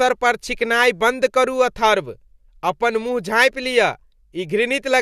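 No technical faults are audible anywhere in the recording.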